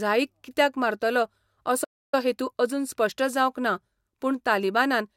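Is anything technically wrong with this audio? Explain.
Yes. There is a playback stall. Between 1.84 s and 2.14 s, just after "कित्याक मारतलो", the speech stops dead and the output is silent for about 289 ms before resuming with "हेतू अजून स्पश्ट जावंक". The gap sounds like an abrupt hole rather than a natural pause. It is likely that the player's buffer ran dry or its playback thread was briefly blocked, so nothing reached the output until data flowed again.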